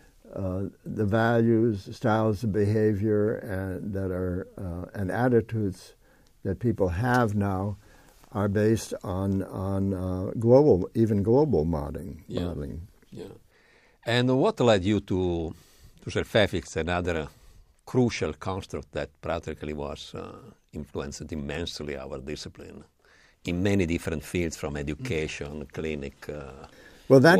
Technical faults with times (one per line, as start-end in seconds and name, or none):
none